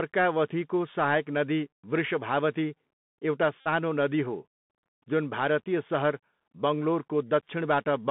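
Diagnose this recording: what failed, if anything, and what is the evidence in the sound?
The whole clip has gone through a Bluetooth CVSD headset codec. The speech is squeezed into roughly 150 Hz to 3.6 kHz, s sounds come out scratchy, and there's a grainy hiss underneath. That's the one-bit delta coder's step size failing to keep up with loud high sounds, plus the granular noise of its up-down steps, which fits CVSD at 64 kbps.

On the wireless link there's a Bluetooth headset packet repeated run from 3.60 to 3.67 s, just before "नदी हो". About 52.5 ms were lost and refilled by decoding the same packet again, so you get a short steady buzz near 267 Hz. That points to about fourteen packets.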